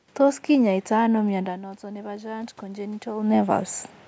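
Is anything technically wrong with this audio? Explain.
Yes. From 1.27 s to 3.35 s there is automatic gain rising. The input level dropped by about 14 dB, around the point where the talker moves back from the microphone near 1.5 s, and the gain control responded by gradually raising its gain by about 6 dB over two seconds. As a result, the speech and the room noise swell upward together rather than the voice recovering alone, leaving a slow, audible lift in the background noise.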